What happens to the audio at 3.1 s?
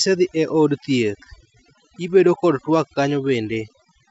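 At 3.1 s the background drops and breaks up into twinkling, warbling specks. This is overdone noise removal, present throughout the clip: noise reduction set too strong shuts off individual frequency bands near its noise estimate, taking quieter parts of the voice with them.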